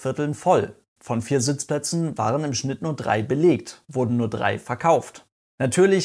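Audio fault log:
Nothing to log here, since the speech comes through without a single fault to point at.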